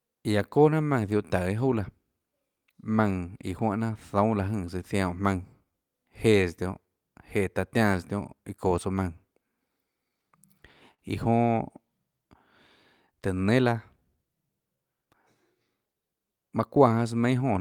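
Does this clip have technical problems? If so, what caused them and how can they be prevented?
Yes. The underlying issue is clock drift between sender and receiver. The sending side's clock runs roughly 2% slow, so the jitter buffer keeps draining throughout the speech and the receiver has to compensate. Syncing both ends to a common clock or adding proper drift compensation would prevent it.

You can hear that compensation as repeated timing corrections from 0.04 to 10.32 s, where playback sits at 98% speed and adds around a third of a second. From 13.12 to 17.19 s it runs at 97% and adds about a tenth of a second. Smoother time-stretching that spreads these adjustments out would hide them better.

There's also a short stall from a late packet at 10.94 to 11.00 s. The buffer ran dry, so the receiver held the last sound for 44 ms until the packet showed up. Nothing is lost, just a brief drawn-out moment. 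A slightly deeper jitter buffer would ride this out.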